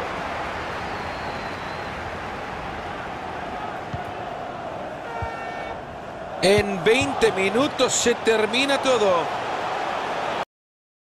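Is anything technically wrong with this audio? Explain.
Yes. At 10.43 s there is a cut-off end: the final buffers were never written or played out, so the sound stops mid-event and drops straight to digital silence, with no natural decay.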